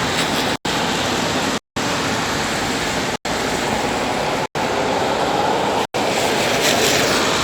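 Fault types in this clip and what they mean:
Block of digital silence: the sound cuts abruptly to nothing five times, leaving holes of about 93 ms and one of about 186 ms at 1.58 s. The output buffer likely went unfilled; the lengths fit 4096-sample blocks.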